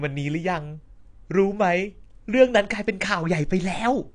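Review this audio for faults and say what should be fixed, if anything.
The speech is dull and smeared from start to finish. Nothing is present above about 9.8 kHz. Sibilants carry a fizzy, warbling edge. This is likely AAC compression, in the AAC-LC form. At a low bitrate the encoder drops the top of the spectrum. It also quantises the remaining bands so coarsely that gaps and substituted noise appear. The damage is plainly audible and points to a bitrate near 32 kbps. Prevent it by encoding at a higher bitrate or keeping an uncompressed master.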